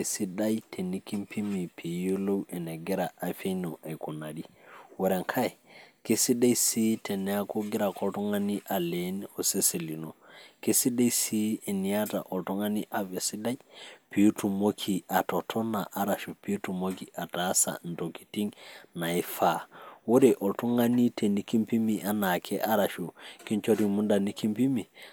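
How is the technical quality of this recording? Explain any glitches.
No technical glitches can be heard anywhere in the recording. The speech continues without any interruption, break or audible disturbance.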